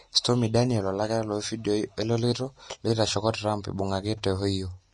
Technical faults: Vorbis compression

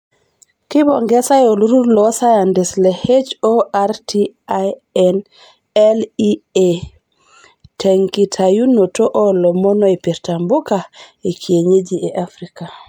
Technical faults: generation loss

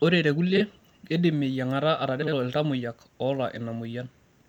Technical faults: frames out of order

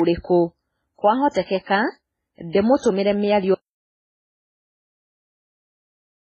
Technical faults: transcoding between lossy codecs; audio dropout to silence

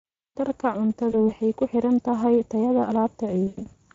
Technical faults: Speex codec; VoIP packet loss concealed by the speech codec

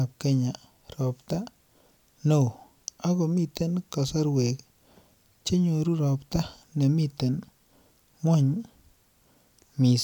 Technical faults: none

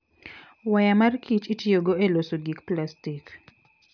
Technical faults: none

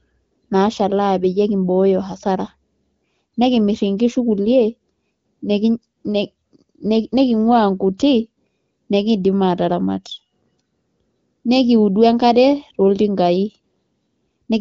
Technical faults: none

